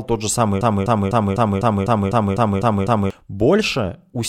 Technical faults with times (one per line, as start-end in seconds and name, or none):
0.61-3.10 broken-record loop